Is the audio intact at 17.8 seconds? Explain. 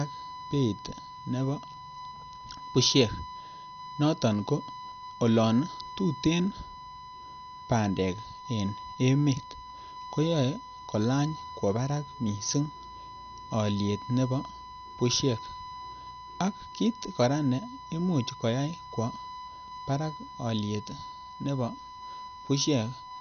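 No. At 17.8 seconds a USB whine runs under the speech, as it does throughout: a steady 1 kHz tone at about 15 dB below the signal, leaking from the bus's 1 ms frame timing. A spectrogram shows it as a flat horizontal line. The speech also sounds dull and gurgling, with nothing above 6.5 kHz. The likely cause is MP2 compression at a low bitrate, around 48 kbps, which switches off the upper sub-bands and coarsely quantises the rest. On a spectrogram this appears as a hard ceiling with patchy, flickering bands below it.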